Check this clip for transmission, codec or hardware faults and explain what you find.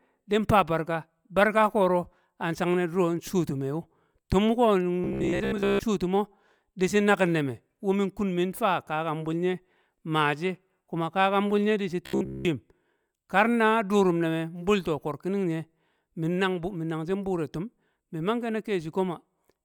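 One fault appears twice: robotic sound from repeated short buffers, at 5.04–5.81 s and 12.06–12.45 s. Speech becomes a metallic 66.8 Hz buzz, likely from a 15 ms buffer being replayed.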